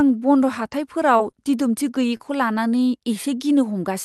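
Scattered short gaps run from 0.63 to 2.57 s in this speech clip: about three brief dropouts, none longer than roughly 20 ms, were patched by extending the preceding sound, leaving small ticks and smears. Chunks out of order appear at 4.0 s, where a 20 ms block plays one chunk late, producing a jumbled moment at the very end. The call-codec path is audible too, with high frequencies stopping near 12 kHz, which fits Opus at a moderate bitrate.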